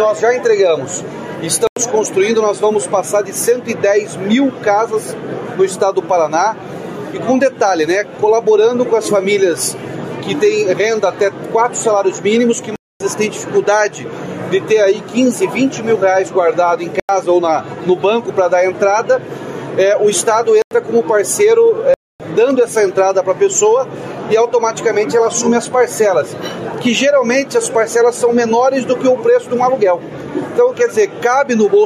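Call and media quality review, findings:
Block of digital silence, 1.67, 12.76, 17.00, 20.62, 21.94 s: hard cut to silence and back. Three 93 ms holes fit a 4096-sample buffer; 12.76 s (245 ms) and 21.94 s (259 ms) longer. Likely audio output buffer not filled in time.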